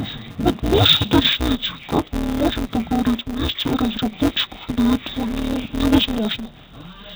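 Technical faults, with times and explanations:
Throughout: interleaved audio read as planar, 5.33 ms blocks split into halves, giving dull, robotic speech with a buzz at 188 Hz and no clear octave drop.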